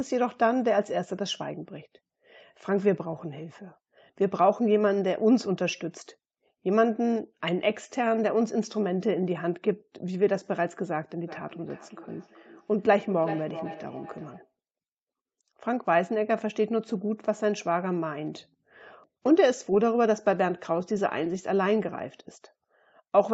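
From 11.27 to 14.53 s there's a feedback echo between two devices. The speech comes back roughly every 0.4 s, each pass thinner and more ringing than the one before, with the strongest repeat sitting about 15 dB under the direct speech. That's a second device in the same room playing this microphone's audio out loud, which then gets picked up again. Its echo canceller only handles its own playback, so it never catches the repeats.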